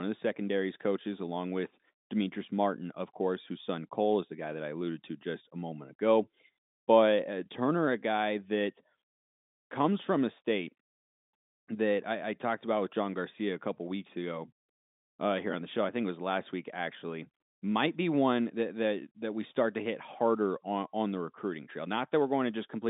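Nothing goes wrong anywhere in this speech recording, which simply carries the usual narrow sound of a G.711 telephone line, with nothing much reaching past about 3.8 kHz.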